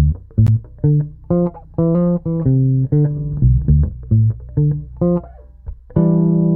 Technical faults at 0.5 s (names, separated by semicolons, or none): gap between stream segments